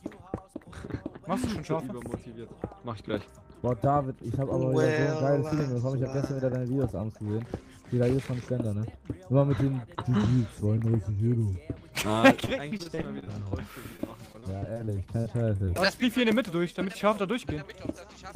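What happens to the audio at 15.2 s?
At 15.2 s the audio is inside a stretch of repeated packet loss (robotic sound), running from 13.97 to 15.74 s. Packets drop out about ten times in quick succession. Each hole is short, the longest around 20 ms. The decoder covers each one by stretching out the last good sound. About a tenth of the stretch is patched this way. The result is a choppy, robotic texture with small pieces missing.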